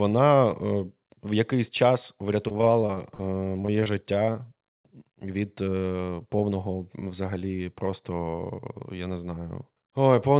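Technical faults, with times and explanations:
2.48–3.88 s, repeated packet loss (robotic sound): right after "в якийсь час" the stream keeps dropping out, 18 gaps with the longest about 43 ms, and each one gets patched by stretching the last bit of sound. About a quarter of that stretch is filler, so it turns choppy.
3.70–4.31 s, jitter buffer slow-down: the receiver was short on reserve, so it repeated pitch periods and bits of pauses to pad things out, adding about 66 ms. That plays the audio at about 90% speed with unchanged pitch, so sounds get drawn out.
4.26 s and 4.32 s, short concealed packet loss: two holes of about 20 ms each, filled by continuing the previous sound and then blending back into the real signal. Each one comes across as a tiny smear or wobble, and a short consonant-like sound can disappear.
6.02–6.52 s, jitter buffer speed-up: the buffer was holding more audio than it wanted, so it trimmed short pitch-period chunks, roughly 40 ms in all. 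The audio runs about 6% fast at the same pitch, enough to sound a touch hurried. The call path itself fits G.711 mu-law, with nothing above 4 kHz.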